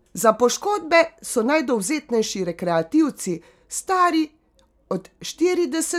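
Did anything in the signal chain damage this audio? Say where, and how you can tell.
No, nothing damaged this audio.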